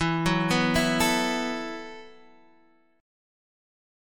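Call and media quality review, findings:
Call and media quality review findings: no faults found in this clip.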